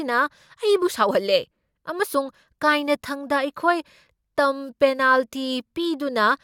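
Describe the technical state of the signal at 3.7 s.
At 3.7 s the speech signal is intact, with no dropout, clipping, distortion or other fault audible at that moment.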